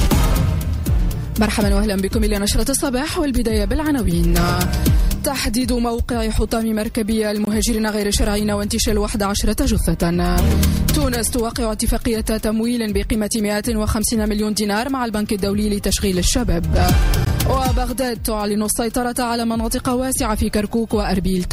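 Blocks of digital silence occur at 7.45–7.47 s (21 ms, fitting a 1024-sample buffer), 10.84 s (5 ms, fitting 256 samples) and 17.25 s (16 ms). Each time, the sound cuts out abruptly and resumes, likely from the output buffer going unfilled.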